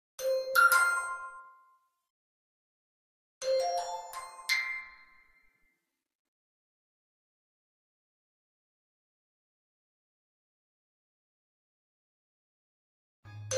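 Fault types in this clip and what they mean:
No faults are audible in this sound recording.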